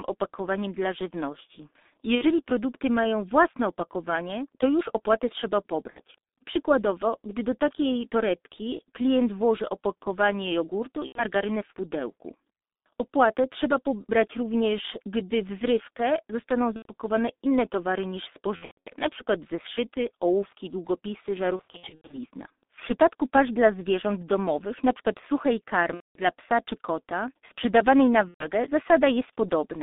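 A speech recording carried over a G.723.1 codec at 6.3 kbit/s. The band sits between 250 Hz and 3.7 kHz. Voices sound muffled and hoarse. Consonants smear because the coarse 30 ms frames update the vocal model slowly. The damage is heavy. VoIP packet loss concealed by the speech codec occurs at 2.15, 5.91 (after "to już opłaty trzeba"), 11.06, 16.76, 18.56, 21.56, 25.94 and 28.28 s. The lost audio runs from 60 ms to 330 ms per event. The decoder stretches the previous sound into a fading buzz. The voice stays weak afterwards.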